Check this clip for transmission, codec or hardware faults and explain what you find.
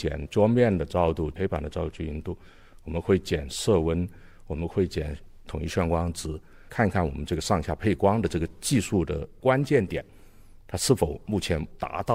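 No transmission, codec or hardware faults turn up in this clip.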